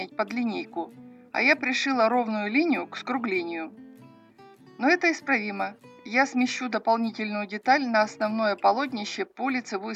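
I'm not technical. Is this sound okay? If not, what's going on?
Yes, the sound is technically fine, with nothing going wrong in the recording or playback at any point.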